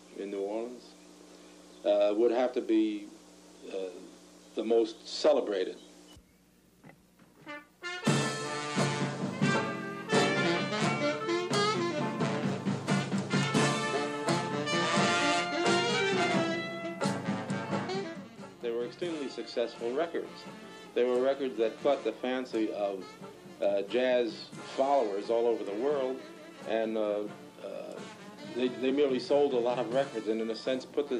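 There's nothing to flag here: nothing in the recording catches the ear as a technical fault at any point.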